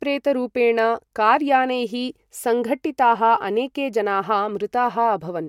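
No technical faults can be heard anywhere in the recording; the speech signal stays intact and continuous throughout.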